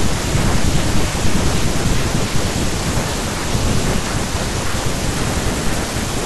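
Chunks out of order from 2.5 to 4.0 s. In this stretch the speech was handled in 500 ms chunks, and one chunk was delivered two chunks late, so it plays after the two chunks that should follow it. Nothing is dropped, but the sequence is shuffled: the 1.5-second passage sounds garbled and jumbled, with a piece of speech surfacing after its proper place. There are three hard joins between mismatched chunks.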